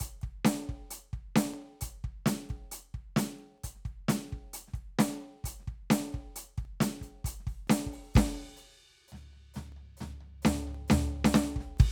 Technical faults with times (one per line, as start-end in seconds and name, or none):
0.51-11.77 periodic USB or driver dropouts